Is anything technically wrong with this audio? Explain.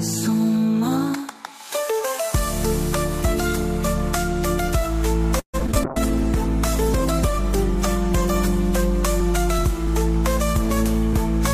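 Yes. From 5.39 to 5.77 s there is repeated packet loss (robotic sound): packets kept going missing, leaving five gaps up to 142 ms long, with about half the stretch patched by extending earlier sound. The result is choppy and robotic. From 5.84 to 8.65 s there is a call bitrate drop: the encoder was starved of bits, which fits a fall from 128 to 17 kbps. For 2.73 s the audio sounds coarse, watery and muffled, with the highs cut off.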